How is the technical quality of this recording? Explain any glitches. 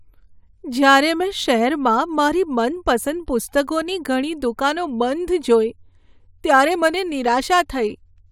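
Nothing technical gets in the way here, as the speech runs along with no glitches to flag at all.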